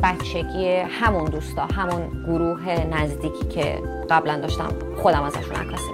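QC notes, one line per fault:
0.10–5.89 s clock slip clicks: two unsynchronised clocks, likely around 400 ppm apart, drop or repeat one sample roughly every 50 ms, heard as a faint, steady ticking rattle.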